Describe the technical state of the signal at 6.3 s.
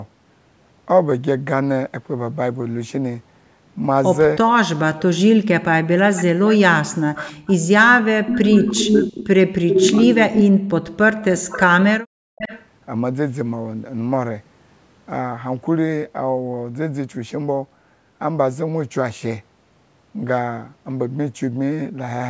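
At 6.3 s there is echo leak from 6.15 to 6.58 s: a faint copy about 15 dB down trails the speech by 395 ms, likely loudspeaker pickup that the far end's echo canceller missed. Unlike room reverb, it is a distinct delayed repeat rather than a smooth decay.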